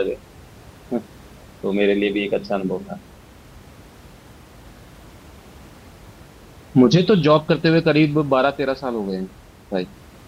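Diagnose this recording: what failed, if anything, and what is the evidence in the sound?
Nothing in the recording points to a failure at any stage, and the only thing under the speech is the ordinary background noise of the room, sitting about 26 dB down, which belongs to the recording itself rather than to the system.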